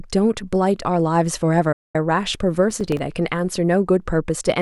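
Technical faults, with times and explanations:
1.72 to 1.95 s, digital broadcast dropout: the speech ducks out over a quick fade of about 8 ms and stays silent for roughly 0.22 s before picking back up. That's the receiver muting because a run of frames arrived corrupt or not at all. The gap points to around nine frames gone, and whatever was said in that stretch is simply lost, not smeared or repeated, so you hear a clean hole rather than a glitchy one.
2.71 to 2.99 s, processor overload crackle: a short, gritty burst rides on the speech for just under 0.3 s. The processor was falling behind and missing buffer deadlines one after another, and each miss dropped a tiny slice of silence into the stream with hard edges on both sides. Those clicks come close together, which fits buffers of a few milliseconds, with something like half a dozen or so missed, and the crackle clears as soon as the load eases.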